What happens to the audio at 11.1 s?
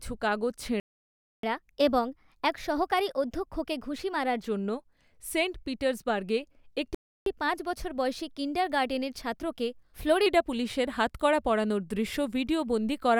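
Nothing goes wrong at 11.1 s: the speech carries on intact through that point with no dropout, click, distortion or other audible fault.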